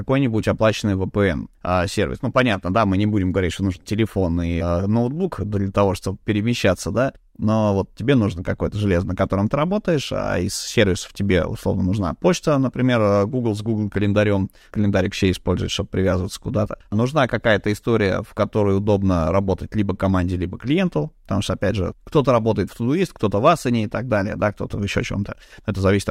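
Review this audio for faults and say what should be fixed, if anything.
Nothing here needs fixing, since the speech comes through without any technical faults to flag.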